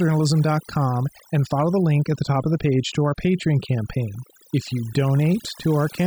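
Throughout the clip there is overdone noise removal: a noise reduction stage set far too aggressively pulls individual frequency bands down or out whenever they approach its noise estimate, taking quieter parts of the speech along. Pauses fall to near silence with twinkling specks.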